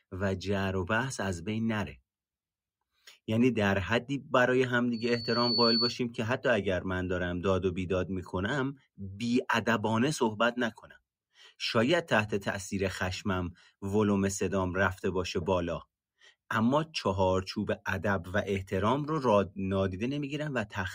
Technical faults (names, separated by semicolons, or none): loudspeaker feedback squeal